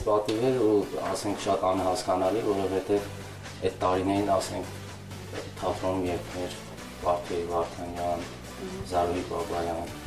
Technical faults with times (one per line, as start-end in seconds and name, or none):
none